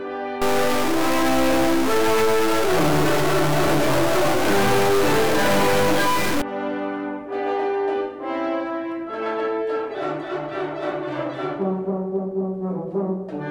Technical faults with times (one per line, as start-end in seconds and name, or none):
0.42-6.42 stuck bit